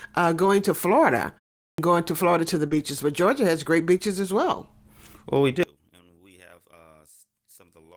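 At 0.41 to 0.47 s, a lost packet is rebuilt from error correction: about 40 ms, consistent with two packets, replaced by the decoder with their low-bitrate backup copies. There is no gap, only a rougher, noisier patch. On a spectrogram it shows as a short smeared band.

At 1.63 s, after a 0.32 s pause, the start is clipped. The output device was still waking when sound returned, so about 153 ms is swallowed and "going to" begins abruptly without its onset. On the waveform, the signal jumps from flat silence straight into the speech.

At 2.67 s, just after "to the", a short packet loss is concealed. About 40 ms never arrived in time, and 36 ms of it was filled by extending the preceding sound. This is heard as a brief smear.

Overlapping it, from 2.71 to 2.81 s, a second stretch of about 60 ms, fitting three packets, is again rebuilt from error correction, with the same grainy texture.

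From 5.63 s to the end, the level drops by about 29 dB and only a faint residue remains. The likely cause is one channel inverted, so that the shared centre content cancels when the channels are summed to mono. The waveform collapses to a thin trace.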